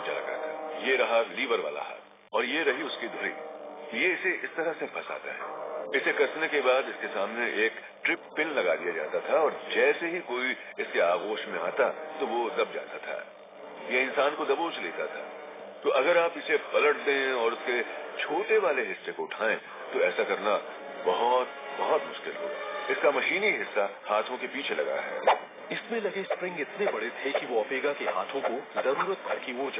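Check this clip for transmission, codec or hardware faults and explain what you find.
Nothing stood out on listening to this clip.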